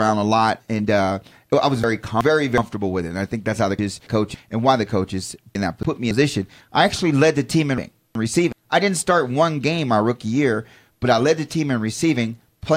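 Frames out of order occur at 1.84–2.58 s, 3.79–4.35 s, 5.55–6.11 s and 7.78–8.53 s. Two adjacent blocks of speech, 0.37 s or 0.28 s each, play swapped. Each sounds like a garbled flutter. No time is lost.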